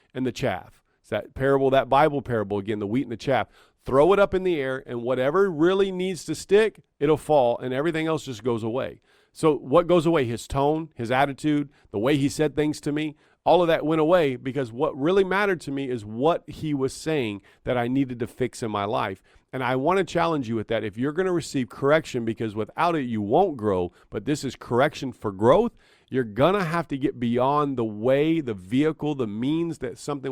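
No technical faults are audible.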